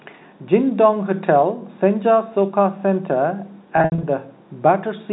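Packet loss with pitch repetition, 3.77 to 4.03 s: about 180 ms of lost audio is bridged by repeating the last pitch period, giving a held, buzzy sound.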